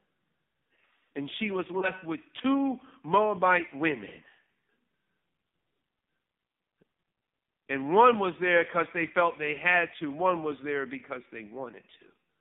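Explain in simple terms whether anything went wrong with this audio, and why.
Yes, two things went wrong. The whole recording went through the AMR narrowband mobile codec, the speech system used on older phone networks. It ran at a low quality setting. Everything above about 3.7 kHz is gone, so the speech sounds muffled. It also sounds strongly buzzy and synthetic.

There is also one lost AMR speech frame, between about 1.80 and 1.92 seconds. A single piece of speech, roughly 20 milliseconds long, was damaged in transmission. The decoder filled the gap by reusing its last good settings at lower volume. That produces a brief dip or warble.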